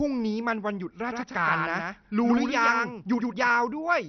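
A starved MPEG Layer II encoder is the likely cause of the damage that runs through the whole speech clip. It runs so short of bits that the upper sub-bands are dropped entirely and the remaining ones are quantised coarsely. This MP2 compression leaves nothing above 6.2 kHz, so the speech sounds dull and muffled, with a gurgling, granular texture. The heavy damage fits a low bitrate around 48 kbps.

From 1.10 s to 3.48 s, the same audio is mixed back in a second time, a full-band copy trailing the original by roughly a tenth of a second. This doubled audio track is probably the result of a second, slower capture path or two out-of-step copies in an edit. The copy sits around 5 dB below the original, with no decay or room colour, and it switches on and off abruptly, giving a hard, flam-like echo.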